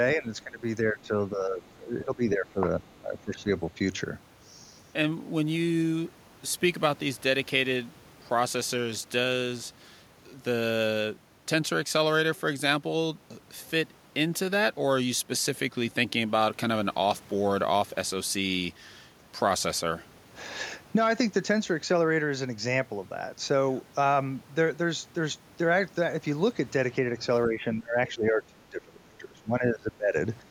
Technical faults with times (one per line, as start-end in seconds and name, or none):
0.15-3.49 speech suppressed in double talk
2.89-3.00 other side's voice leaking through
27.48-30.15 speech suppressed in double talk
30.41-30.51 speech suppressed in double talk